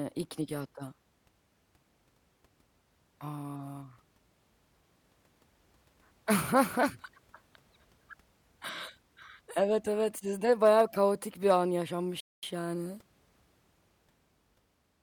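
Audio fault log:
12.20–12.43 s, playback stall: after "bayağı kaotik bir an" the speech drops to about 0.22 s of flat silence, a blank gap across the waveform and spectrogram, likely a player starved of data.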